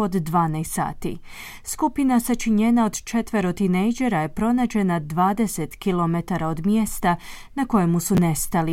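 Chunks out of order occur at 7.33 to 7.35 s, just after "km od mjesta", and again at 8.15 to 8.18 s, after "km od mjesta na". In each, a 10 ms slice of the speech plays late. It lands one chunk behind its place the first time and two chunks behind the second time. No audio is lost, but the sequence is scrambled. Each event leaves three abrupt joins, heard as a brief jumbled stutter.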